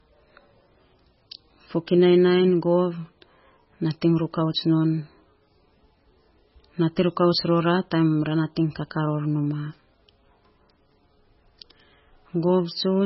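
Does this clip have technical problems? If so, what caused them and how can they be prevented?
Yes. Throughout the speech there is heavy MP3 compression damage, likely from encoding at a very low bitrate, which the sound suggests is around 16 kbps. With so few bits, the treble is cut off and weak frequency lines flicker in and out between frames, giving a watery, swirly quality and smeared consonants. A spectrogram would show a hard ceiling with nothing above 5.6 kHz and patchy, blinking holes below it. Encoding at a higher bitrate, or keeping a lossless copy, would prevent this.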